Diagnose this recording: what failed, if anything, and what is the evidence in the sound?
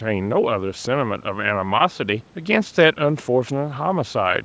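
A steady train of faint clock slip clicks runs from 0.14 s to 4.4 s, about one every 50 ms, roughly a hundred in all. These are likely single-sample slips at a converter or clock boundary, which fits a clock mismatch near 500 ppm. On a spectrogram they appear as evenly spaced thin vertical lines, stopping at the 8 kHz ceiling of the call processing. On a waveform they appear as tiny one-sample steps.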